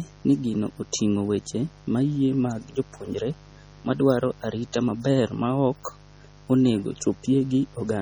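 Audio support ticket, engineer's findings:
Mains buzz, throughout: steady raspy 50 Hz buzz, roughly 25 dB under the speech. Switching spikes twice per mains cycle via dimmer, rectifier or missing shield; harmonics reach several kHz.

MP3 compression, throughout: heavy watery swirl, metallic chirps on s sounds, smeared attacks, nothing above 20.8 kHz. Likely MP3 encoding, fitting about 32 kbps; weak frequency lines zeroed frame to frame.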